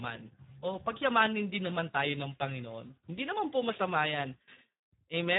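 From start to finish the speech sounds hoarse and noisy, with nothing above 3.8 kHz: heavy Speex codec damage, fitting a starved 8 kbps setting.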